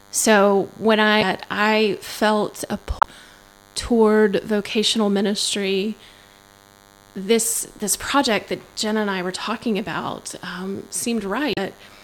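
DECT cordless phone buzz runs through the whole recording: a thin, steady buzz at 100 Hz, rich in harmonics, sitting well below the speech. A nearby DECT handset or base station transmits a short radio burst every 10 ms. Something in the audio circuit rectifies those bursts, so their repetition rate becomes an audible tone at 100 Hz. Because the bursts are pulses rather than a sine wave, the buzz carries a stack of harmonics above it.

Damaged data in a compressed stream appears at 1.21 s, from 2.99 to 3.05 s, and from 11.53 to 11.58 s. Each event is a brief chirp, squawk, click or short hole that interrupts the speech. At each point the compressed data was corrupted, so the decoder misread or rejected those frames, lost its place, and searched ahead for the next valid frame header before normal playback resumed.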